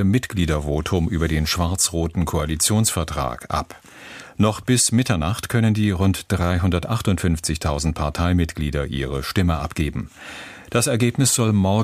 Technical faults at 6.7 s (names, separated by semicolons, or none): none